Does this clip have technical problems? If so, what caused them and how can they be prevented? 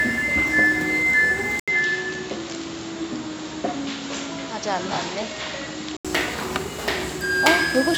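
Yes. At 1.60 s the input likely switched to a poorer device. The sound falls silent for 80 ms, then loses everything above 7.5 kHz and turns dull, with new background noise about 30 dB down but roughly unchanged level, until it clears at 6.05 s. To prevent this, lock the recording input to one fixed device and disable automatic device or headset-profile switching before recording.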